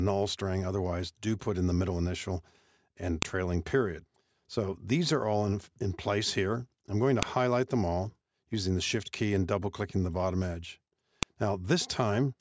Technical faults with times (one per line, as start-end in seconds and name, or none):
3.22 file header played as audio
7.23 file header played as audio
11.23 file header played as audio